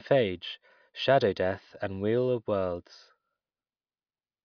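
Listening through this speech recording, nothing stood out as a technical problem at any point.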